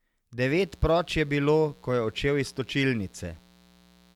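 From 0.46 s to the end, a mains buzz sits under the speech. It is a steady, raspy drone built on 60 Hz. Sharp switching spikes, twice per mains cycle, leaked in from a dimmer, rectifier or unshielded line. Their harmonics stack up into the kilohertz range. The buzz stays well below the speech.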